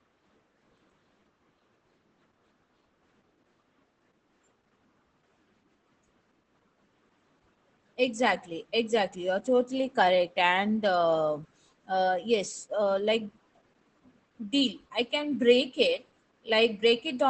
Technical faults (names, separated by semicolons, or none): Opus voice compression